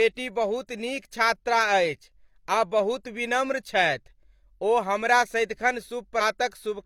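At 6.17 to 6.21 s, compressed frames are skipped and the speech jumps about 150 ms ahead.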